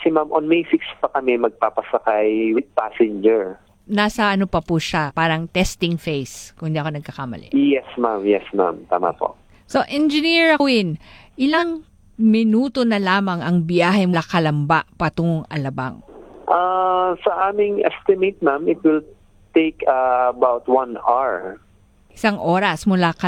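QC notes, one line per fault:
2.54–2.62, 5.06–5.11, 10.56–10.60, 11.50–11.64 and 14.10–14.15 s, compressed frames skipped: the sound jumps ahead about 40 ms at the first two, about 100 ms at 10.56 and 14.10, and about 150 ms at 11.50, because whole frames were dropped.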